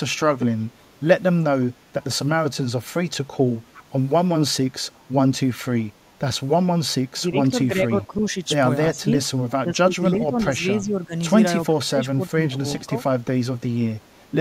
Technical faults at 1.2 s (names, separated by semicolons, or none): none